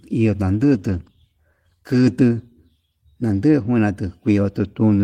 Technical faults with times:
0.60-2.21 call bitrate drop

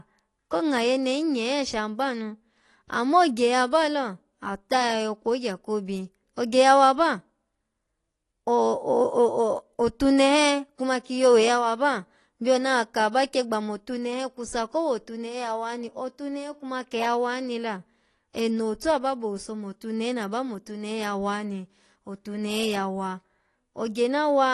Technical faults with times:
0.00-24.54 AAC compression

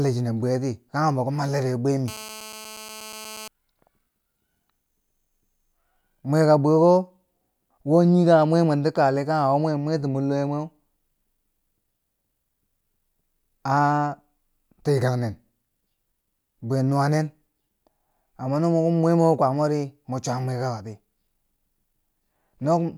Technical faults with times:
2.08-3.48 GSM phone buzz

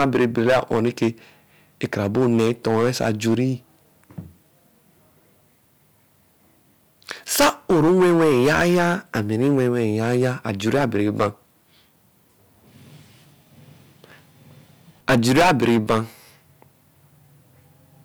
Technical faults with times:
0.00-1.08 hard clipping
1.84-3.41 hard clipping
7.11-11.27 hard clipping
15.09-15.99 hard clipping

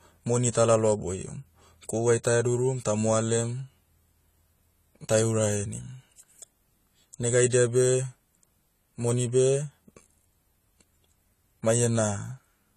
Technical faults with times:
0.00-12.77 AAC compression

